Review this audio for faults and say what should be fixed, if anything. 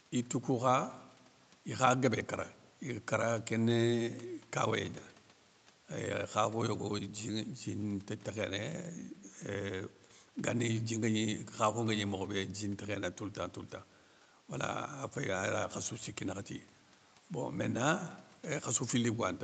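Nothing needs fixing, since the speech has the normal band limit of call audio, with no content above 8 kHz from the call's microphone processing and Opus coding.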